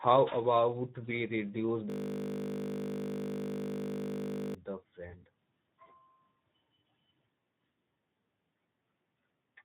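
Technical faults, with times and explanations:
throughout: Speex codec. The speech was carried at a low Speex setting, which fits roughly 11 kbps, leaving too few bits for the excitation signal. The result is plainly audible hoarse, noisy roughness, and nothing remains above about 3.8 kHz, so the sound is dull and narrowband.
1.9 to 4.55 s: system hang loop. The computer or driver froze while the sound hardware kept replaying one 20 ms piece of its buffer, which fits a short ring buffer. That exact repeat at 50 Hz turns the audio into a steady buzz for over two and a half seconds.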